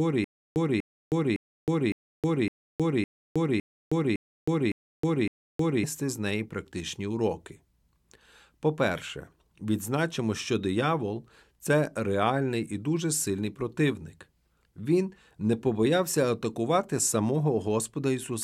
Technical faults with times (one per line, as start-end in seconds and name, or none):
0.00-5.84 stutter with silent gaps